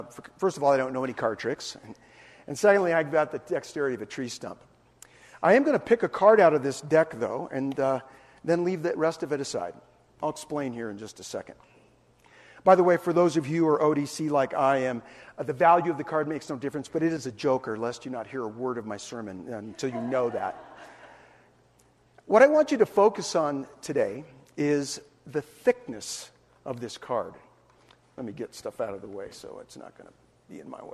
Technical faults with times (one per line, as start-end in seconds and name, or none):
none